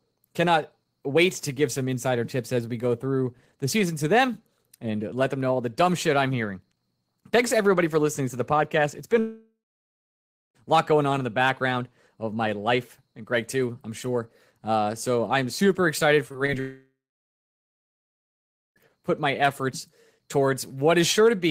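From 9.19 to 10.57 s the sound thins into a fading buzz and then about a second of silence before resuming past a gap, likely a long network dropout where roughly 1.4 s never arrived and the receiver extended the last sound until it gave up. Around 16.29 to 16.36 s and again at 16.46 to 16.50 s brief smears and wobbles come from short concealed packet loss: 20 ms packets went missing and were patched by continuing the preceding sound. Right after, from 16.60 to 18.78 s, likely a second long network dropout fades out into about 1.8 s of silence, with about 2.2 s of audio lost.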